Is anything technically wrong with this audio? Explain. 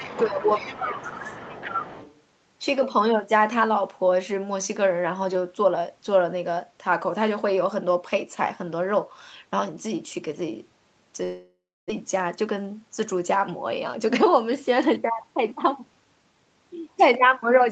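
Yes, there are four faults.

From 0 to 2.21 s a second voice sits underneath, at about 15 dB below the main speech. This is the other side's voice leaking through, likely because loudspeaker echo was not fully cancelled. It is a separate voice, not a reverberant tail of the talker's own speech.

Between 0.29 and 1.85 s the main voice dips by up to roughly 10 dB, over about a second in total. This is speech suppressed in double talk, likely from the echo canceller turning everything down while both sides spoke. The level falls only while the leaked voice is present, so it is not a network loss.

From 11.23 to 11.99 s comes a long network dropout, likely from no audio arriving. About 0.66 s is filled with a fading continuation of the last sound, followed by roughly 0.3 s of silence. Some 0.6 s of audio is simply gone, unlike a brief click-like packet loss.

From 12.48 to 12.83 s the speech runs at 112% speed with unchanged pitch. 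This is a jitter buffer speed-up, which cut the backlog by trimming pitch-period pieces, roughly 50 ms in all. It sounds hurried rather than chipmunk-like, which separates it from a sample-rate error.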